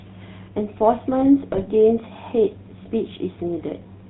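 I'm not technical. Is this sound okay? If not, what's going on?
No. GSM full-rate codec damage runs through the whole clip. This is the old digital mobile phone system, which boils the voice down to a simple model of the throat and mouth, excited by a regular train of pulses, and keeps only a sparse outline of that pulse signal. Nothing above about 4 kHz survives, so the speech sounds dull and muffled, with a clearly audible buzzy, gravelly roughness.

GSM bit errors strike from 1.52 to 1.63 s, a burst lasting about a tenth of a second. Here the phone link was weak, so some of the digital information describing the speech arrived corrupted. The decoder rebuilt those moments from wrong instructions, which bent the tone and threw the loudness off, so the voice briefly breaks up into squawks, pops and a gargling sound before settling back.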